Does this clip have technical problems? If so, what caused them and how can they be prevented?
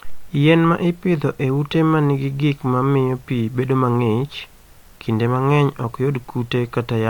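No, the speech signal shows no technical problems, so there is nothing here that needs preventing.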